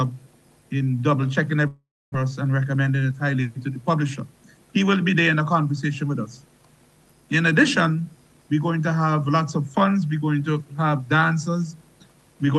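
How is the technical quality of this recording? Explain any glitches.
The recording has two distinct glitches, both typical of audio carried over a real-time call link. Throughout, the sound is band-limited to about 12 kHz with codec coding noise, which points to a call codec such as Opus at around 32 kbps.

From 1.67 to 2.16 s there is a long network dropout, most likely caused by packets failing to arrive. The receiver concealed the gap by extending the last received sound as a decaying buzz or hiss. About 270 ms of the stretch ends in near silence. When audio resumes, roughly 400 ms of the original material is missing. The playout delay shifts by something like 50 ms across the gap.

From 2.76 to 3.13 s comes a jitter buffer speed-up. After the dropout the buffer held more audio than its target. To shed the surplus, the receiver cut out short pitch-period-length pieces repeatedly, removing around 50 ms in total. 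This section plays at about 112% speed with the pitch unchanged, so it sounds noticeably hurried before normal pacing returns.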